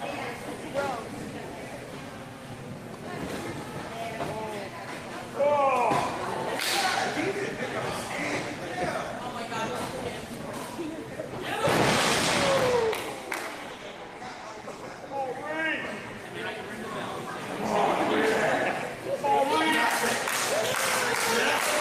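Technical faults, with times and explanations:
13.71–15.03 s, call bitrate drop: the sound turns coarse and watery, with dulled highs, for about 1.3 s. This fits the encoder falling from about 32 to 18 kbps. Unlike packet loss, nothing drops out or repeats; the quality simply sags, then recovers.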